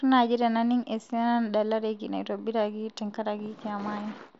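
Speech, with no technical faults to report. It has passed through a Bluetooth mSBC headset codec, so nothing is present above 7.7 kHz and there is a light codec graininess on the louder sounds.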